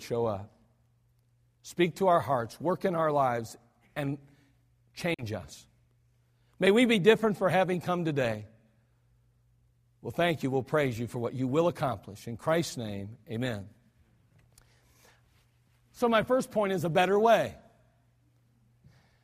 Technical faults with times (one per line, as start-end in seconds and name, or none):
5.14-5.23 Bluetooth dropout